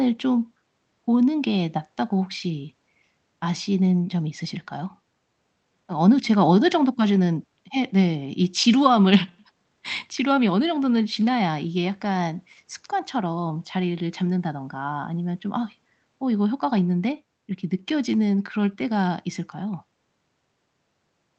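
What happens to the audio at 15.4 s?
Nothing goes wrong at 15.4 s: the speech carries on intact through that moment, with no dropout, click or glitch.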